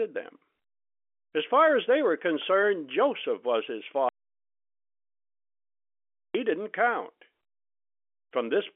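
At 4.09 s, right after "was his", the speech cuts off into an audio dropout to silence lasting 2.26 s, until it resumes at 6.35 s with "didn't count". The gap holds no room tone, so the input was likely lost while silence kept being written. On a waveform it appears as a flat line, and on a spectrogram as a blank vertical band.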